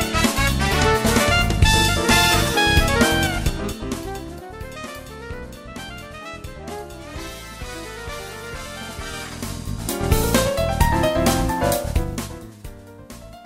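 From 3.16 to 4.44 s the level drops roughly 15 dB, and you get zipper noise: it falls in 3 dB steps, about four a second, with no smoothing, so each step ticks. It happens again from 9.05 to 10.07 s as the level climbs back, now about five steps a second.

From 10.81 s to the end there's video or display buzz, a screen or video cable leaking into the audio. It's a 60 Hz field-rate buzz with hash above it, sitting around 25 dB under the sound.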